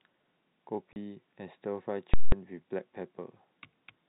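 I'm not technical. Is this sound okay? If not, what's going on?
No. Two problems stand out in this speech recording, which otherwise carries the narrow, telephone-like sound of G.711 telephone coding.

At 0.93 to 0.96 s there is a brief hole: packet loss filled with silence. For 30 ms the sound simply stops, which fits a single lost packet. Unlike a gradual fade or a muffled gap, it cuts to total silence and back instantly.

At 2.14 to 2.32 s comes a jolt from invalid numbers at full scale. A calculation broke, and for about 0.19 s the output was pinned at maximum level. You hear a very loud pop, then nothing, then another pop. Ordinary clipping distorts the speech but leaves it audible. Here the speech is gone entirely.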